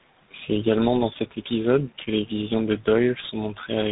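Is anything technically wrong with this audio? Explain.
Yes, there are two faults.

Tandem speech coding runs through the whole clip. The call appears to have passed through two speech codecs in a row, such as GSM full rate and then G.726, each re-coding the other's degraded output. The speech sounds rough, muffled and warbly, with nothing above 3.8 kHz.

Clock slip clicks run from 0.30 s to the end at 3.92 s. These likely come from two unsynchronised clocks drifting by roughly 100 parts per million, which fits single-sample slips. The result is faint, regular ticks about every 0.2 s, around fifteen in all.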